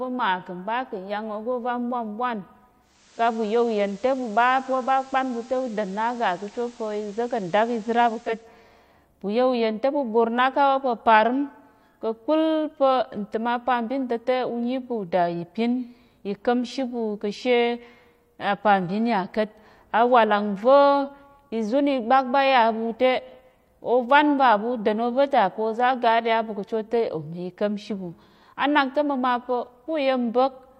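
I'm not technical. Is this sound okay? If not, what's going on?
No. From 2.8 to 8.55 s, digital radio blending to analogue: the radio eases over to FM, bringing faint hiss. It never goes silent, unlike a dropout.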